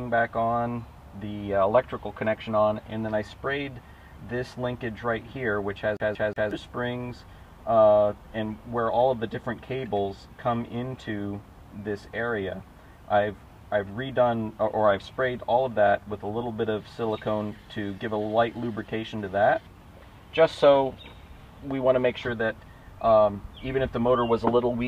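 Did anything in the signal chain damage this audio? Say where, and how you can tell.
Yes: a CD stuck on one turn at playback, 5.97 to 6.51 s. A scratch makes the laser jump back, replaying the same 181.5 ms segment three times with brief mutes.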